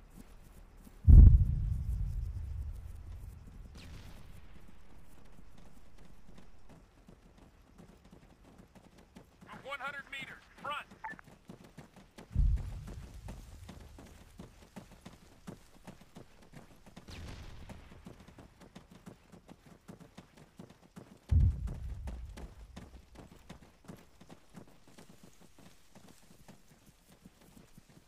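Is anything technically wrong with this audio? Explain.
No, nothing here sounds technically wrong; it's all fine to the ear from beginning to end.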